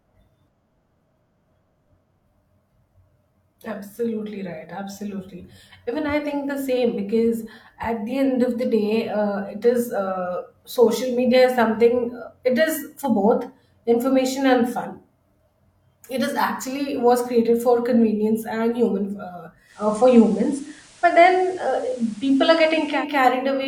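A speech recording in which, at 19.65 s, just after "convenience and human uh", a hybrid receiver performs a digital radio blend to analogue: over a quick 171 ms cross-fade the sound switches to the station's FM broadcast. Hiss rises to roughly 30 dB below the signal, and the level shifts by about 3 dB. The receiver blends back to digital at 23.05 s.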